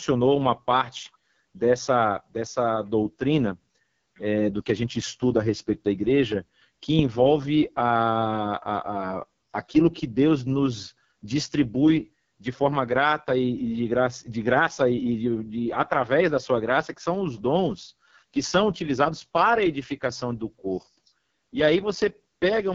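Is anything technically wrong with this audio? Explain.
Yes. The speech has been through the AMR wideband (HD Voice) codec for its whole length, and the heavy damage suggests one of the codec's lowest modes, probably 6.6 kbit/s. The coder models the voice as pulses exciting a vocal tract filter and substitutes shaped noise for the top band. Speech therefore sounds rough and raspy, with a synthetic, buzzy texture, and nothing is present above about 7.5 kHz.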